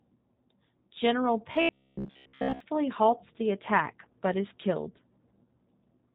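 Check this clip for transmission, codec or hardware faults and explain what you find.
Two faults are present: codec damage across the whole clip and a robotic stretch in the middle.

The speech has passed through a G.729 codec, which rebuilds each 10 ms frame from a vocal tract filter, a pitch predictor and a few pulses, and the coding fits 8 kbit/s. Nothing above 4 kHz survives, so the speech sounds muffled, plainly rough and synthetic.

From 1.52 to 2.60 s there is robotic sound from repeated short buffers, likely caused by audio arriving too seldom so playback loops the last 15 ms. Most of that stretch is repeats, imposing a rigid metallic buzz at 66.7 Hz.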